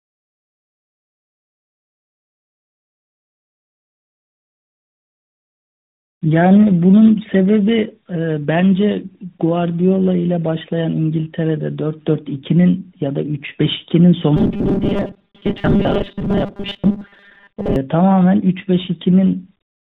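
Throughout the speech, tandem speech coding leaves it rough, muffled and warbly. Two speech codecs in a row each re-encode the previous one's damage, the last fitting AMR-NB. A spectrogram shows nothing above about 4 kHz and smeared, blotchy harmonics.

From 14.36 to 17.76 s, robotic sound from repeated short buffers turns the speech into a rigid metallic buzz at 200 Hz. This is likely caused by a 5 ms stretch being looped while most real audio is skipped. The waveform shows identical repeating cycles, and the spectrogram shows flat, evenly spaced harmonic lines.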